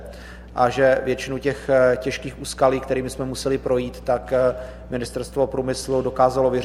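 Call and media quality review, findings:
Mains hum, entire clip: steady 60 Hz tone with low harmonics, roughly 20 dB under signal. Probable ground loop or nearby transformer coupling power line into analogue input path.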